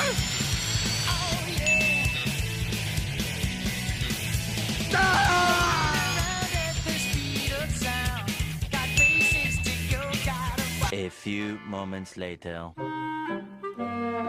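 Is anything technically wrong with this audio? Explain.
No, no technical faults heard.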